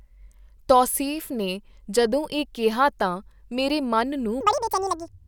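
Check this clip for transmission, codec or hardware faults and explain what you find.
One fault, in the final stretch of the clip. From 4.41 s to the end at 5.27 s, just after "ਕਿਹਾ ਤਾਂ ਮੇਰੇ ਮਨ", the audio is read two samples at a time, at double speed. The reader treats each pair of samples as one frame, as if the stream had two channels or twice-wide samples. Playback runs twice as fast and 12 semitones higher, a full octave. The speech turns into a quick, chipmunk-like chatter.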